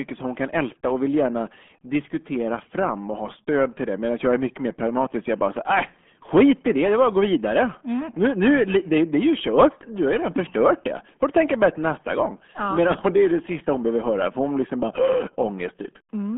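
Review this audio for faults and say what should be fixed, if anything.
The speech has been passed through the RealAudio 14.4 codec for its whole length. This dial-up era speech coder squeezes audio into a tiny data rate, and the damage here fits an 8 kbit/s stream. It keeps only a telephone-like band from about 150 Hz to 3.4 kHz, with nothing above 3.7 kHz, and its coarse modelling leaves heavy codec damage, so the voice sounds muffled and gargly throughout. To prevent this, source the recording from an original or high-bitrate copy rather than a low-rate RealAudio version.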